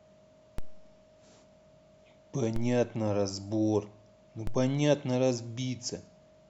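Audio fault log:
0.58 s, 2.56 s, 4.47 s: DC step. The waveform's zero line jumps by about -24 dBFS at each point, then drains away slowly, which fits a high-pass near 2 Hz. Each sudden offset sounds as a low thump under the speech, which continues unchanged.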